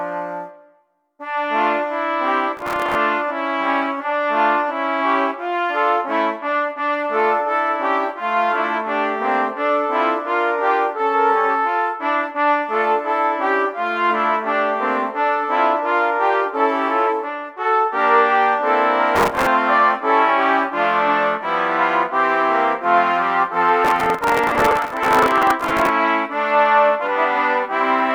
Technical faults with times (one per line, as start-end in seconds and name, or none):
2.57-2.95 processor overload crackle
19.15-19.47 processor overload crackle
23.85-25.89 processor overload crackle